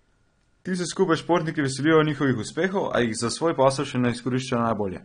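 Throughout the speech, heavy lossy encoding, likely AAC compression at a low bitrate near 32 kbps, leaves the sound dull and smeared, with warbling, fizzy sibilants.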